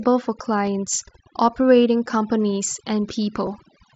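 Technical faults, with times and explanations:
Throughout, overdone noise removal: the noise reduction was set far too hard, so any frequency band that dips near its idea of the background noise is pulled right down or switched off. The quieter parts of the speech go with it, while the gaps between phrases fall to near silence broken by small twinkling specks where isolated bands briefly survive the gating.
At 3.46 s, concealed Bluetooth headset packet loss: a brief gap of about 7.5 ms, which fits a single lost frame on the headset link, was patched by the receiver repeating the best-matching stretch of the waveform it had just played. Because only one short piece is missing, the patch blends in and is nearly inaudible on the wideband mSBC connection.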